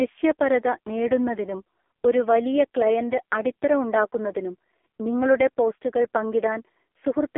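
From start to finish the speech carries AMR narrowband mobile codec damage, heavy enough to suggest one of its lowest modes, around 5 kbps. The voice sounds buzzy and synthetic, squeezed into a 250 Hz to 3.4 kHz band, and a spectrogram shows nothing above 3.6 kHz.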